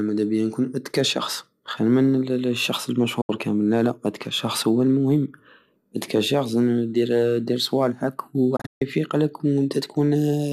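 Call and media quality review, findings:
Digital broadcast dropout, 3.21–3.30 s: speech mutes for about 72 ms after an 8 ms fade, then resumes mid-programme. Receiver muting on failed frames, fitting roughly three lost frames. Waveform: abrupt taper to a flat line; spectrogram: full-band blank column.

Digital broadcast dropout, 8.56–8.82 s: short holes totalling 192 ms over 240 ms, longest 144 ms, 8 ms fades. Repeated frame losses or checksum failures. Spectrogram: broken vertical gaps; waveform: stuttering flat segments.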